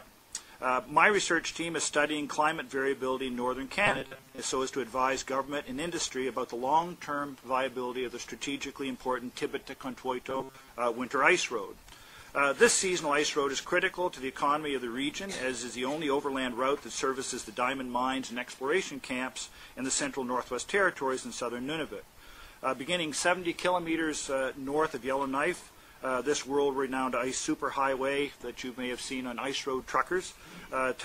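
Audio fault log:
3.87–4.38 s and 10.30–10.68 s, robotic sound from repeated short buffers: in both stretches the sound turns into a rigid, metallic buzz locked at 133 Hz that only loosely follows the original. The likely cause is audio arriving too seldom, so a short chunk of about 7.5 ms gets replayed over and over to fill the gap. That steady repeat rate sets the buzz, and roughly 70 percent of the material in those spans is repeats rather than fresh audio.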